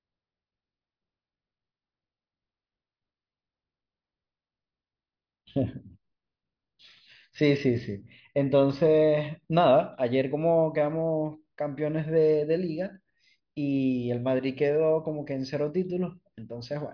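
Listening to the speech recording, nothing technically wrong stood out at any point.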